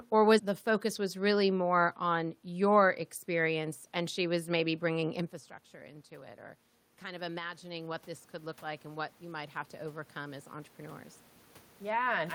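Around 5 s the talker drops back from the mic, so from 6.08 to 11.11 s the automatic gain rising kicks in, pushing up about 8 dB and swelling voice and room noise together.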